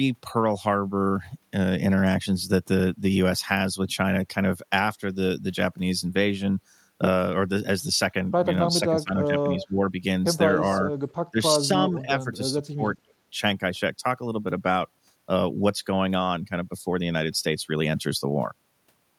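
From 8.73 to 9.37 s and again from 9.57 to 9.93 s the speech sinks by around 15 dB in short patches, thinning and briefly cutting out. This is speech suppressed in double talk, likely from an echo canceller that could not separate this talker from incoming far-end sound and turned both down. On a waveform the envelope dips abruptly. On a spectrogram the upper harmonics fade first, leaving ragged gaps.

Overlapping that second dip, at 9.59 to 9.66 s, a faint copy of earlier speech returns about 294 ms late and some 15 dB below the talker: echo leak, likely residual loudspeaker pickup that the canceller failed to remove. On a spectrogram it shows as a weak smear repeating the harmonic pattern at that fixed delay.

A much quieter scrap follows at 11.09 to 11.14 s, around 35 dB down with the same 294 ms delay. It is barely a trace on the spectrogram.

Suppression returns at 11.31 to 11.40 s and 11.56 to 11.75 s, each about 15 dB deep. 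A longer patch runs from 11.92 to 12.82 s, shallower at roughly 10 dB. These show as notched, uneven stretches in the envelope with high-frequency energy missing.

A last trace of echo, about 40 dB down and delayed 274 ms, sits at 13.08 to 13.13 s.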